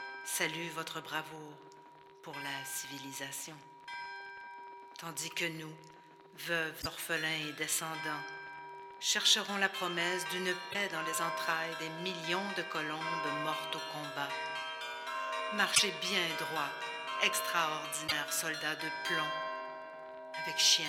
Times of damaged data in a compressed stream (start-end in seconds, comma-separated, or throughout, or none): 6.78-6.86, 10.70-10.75, 15.71-15.80, 18.04-18.12